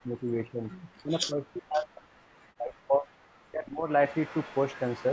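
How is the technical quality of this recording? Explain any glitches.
The recording has clear processing faults: the speech is repeatedly pushed down, and faint delayed repeats leak in. The call's microphone processing leaves the audio band-limited, with nothing above 8 kHz.

Speech suppressed in double talk, from 0.02 to 3.09 s and again from 3.42 to 3.89 s: the speech dips deeply, by around 40 dB at worst. This is likely an echo canceller turning its own talker down while the other side spoke. On the waveform the envelope collapses in stretches, and on the spectrogram the bands fade and break into fragments.

Echo leak, from 1.73 to 1.82 s and from 4.07 s to the end: a faint delayed copy of the speech sits about 20 to 25 dB below it, lagging by 379 ms and then 444 ms. This is likely loudspeaker pickup that the canceller failed to remove. On the spectrogram it appears as weak, offset duplicates of the speech harmonics.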